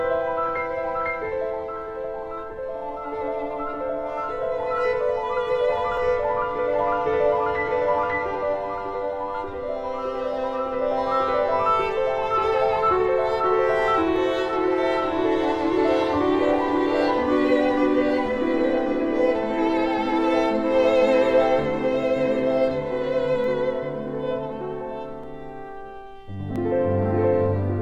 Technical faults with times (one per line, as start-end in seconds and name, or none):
5.97 dropped buffer (overrun)
14.16-23.44 doubled audio track
25.23 dropped buffer (overrun)
26.56 dropped buffer (overrun)